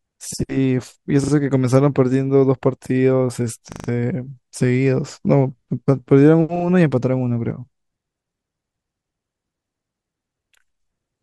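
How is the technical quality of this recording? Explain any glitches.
The speech has four stutters from a repeated buffer, at 1.24–1.32, 3.72–3.88, 6.56–6.64 and 8.0–8.04 s. New audio arrived late, so the device replayed the last chunk, which fits a 40 ms buffer, one to four extra times with hard joins. Essentially nothing is lost, just brief stuttering.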